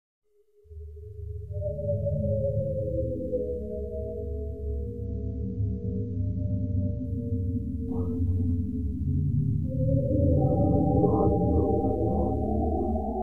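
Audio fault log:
5.05 to 7.05 s, adaptive stream at a lower bitrate: the top end abruptly collapses, with nothing above about 6.9 kHz, and what remains takes on a smeared, watery codec texture; then the full treble returns just as suddenly, with no gap at either edge. The player switched to a much leaner encoding for these two seconds, as it does when the connection slows, consistent with AAC dropping from around 96 to around 24 kbit/s before switching back.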